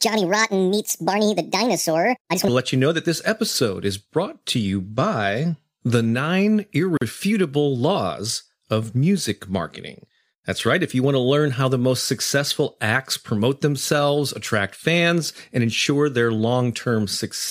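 A section at the wrong speed runs from 0 to 2.48 s, ending just before "to let you know". The opening is played 1.51 times faster than it was recorded, so the voice comes out hurried and raised by roughly seven semitones, with speed and pitch shifting together. At 2.48 s it drops abruptly to natural pace and register. This is likely the result of that stretch being played or edited against the wrong clock, so its samples were read out too quickly.

A gap at a join of encoded pieces opens from 6.97 to 7.01 s, right after "you by the nine". For 42 ms the speech breaks off, with a silent core shorter than that, and then it resumes exactly where it left off, with nothing missing. The edges are smeared. Two separately encoded segments were butted together without trimming, so the first segment's padded final frame and the second segment's start-up delay both stayed in as a hole in otherwise continuous sound.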